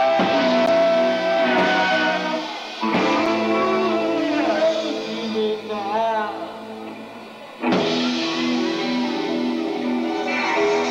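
At 0.66 s and 3.26 s, a block of digital silence replaces the sound. The gaps last 11.6 ms and 4.4 ms. The first fits a 512-sample buffer. Either output wasn't filled in time or a calculation failed. Each gap is heard as a tick or dip.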